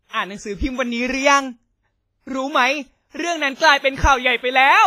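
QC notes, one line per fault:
Throughout, WMA compression: the speech has likely passed through a Windows Media Audio encoder at a low bitrate, with damage heavy enough to fit something near 24 kbps. The transform coder spreads its quantisation error across long blocks, so each syllable carries a ringing, washy smear and a hiss that swells and fades with the level. Weak spectral detail has been zeroed, leaving a thinned texture, and nothing remains above 15.5 kHz.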